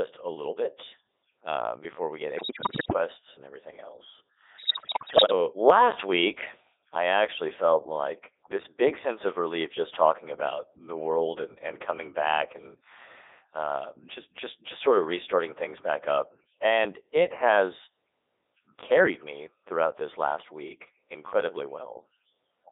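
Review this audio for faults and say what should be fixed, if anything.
Codec 2 vocoder, throughout: the speech is rebuilt from pitch, voicing, energy and a spectral envelope, with sine-wave synthesis rather than the original waveform. It sounds robotic and buzzy, held to roughly 250 Hz to 3.7 kHz, which fits Codec 2's 3.2 kbit/s mode. To prevent it, record or relay through a wideband waveform codec instead of a low-rate vocoder.

Bit errors on digital voice radio, 2.36 to 2.98 s and 4.58 to 5.32 s: corrupted bits land in frame parameters, so the synthetic voice lurches in pitch, level and timbre and dissolves into warbling gibberish. The damage in the first burst points to an error rate near one bit in five, and in the second to about one in ten. To prevent it, improve the radio link's signal margin or add stronger error protection on the vocoder frames.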